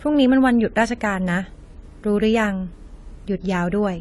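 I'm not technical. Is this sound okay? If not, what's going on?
No, not quite. All the way through, the speech has a dull, smeared quality, with a warbly, fizzy edge on hissy sounds like s and sh. That's most likely AAC compression squeezed too hard: to save space it throws away detail, and here nothing above about 11.5 kHz survives, so the crisp top end is gone and what remains gets watery.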